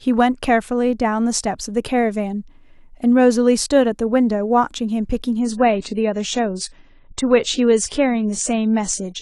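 From 5.39 s to the end, the speech abruptly loses its upper treble, with nothing above 10 kHz, and sounds thinner and more processed, with no gap. This is an adaptive stream at a lower bitrate, consistent with a drop from about 96 to 24 kbit/s AAC.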